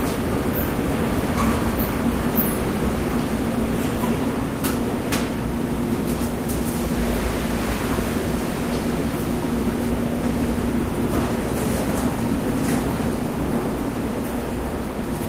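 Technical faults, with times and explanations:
No technical faults can be heard in these sounds.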